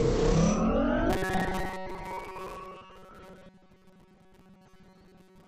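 From 1.10 s to the end of the clip, fresh audio likely stopped arriving often enough, so the playback side kept filling the gaps by looping its last short buffer, roughly 70 percent of the time, while the real material in between was dropped. This is robotic sound from repeated short buffers: each repeat cycle is about 5.3 ms, which stamps a fixed buzz at 188 Hz onto the sound. What remains is a rigid, metallic drone that only loosely tracks the original.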